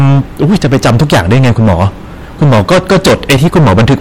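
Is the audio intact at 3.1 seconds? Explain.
No. Hard clipping runs through the whole clip, including 3.1 s. The speech is driven about 22 dB past what the stage can pass. Nearly a third of the samples are cut flat. The flattened peaks add high harmonics, giving a harsh fuzz on every loud sound.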